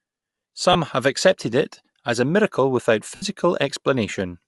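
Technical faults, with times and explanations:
Throughout: Bluetooth LC3 compression. Speech has a plainly grainy, breathy top end, with upper frequencies noise-filled, likely from LC3 coding at a rate that fits around 48 kbps.
0.73–0.75 s and 3.15–3.23 s: lost LE Audio frames. The decoder repeats the last spectrum with scrambled phase, so 20 ms, then 70 ms, smear into noise, the longer one fading.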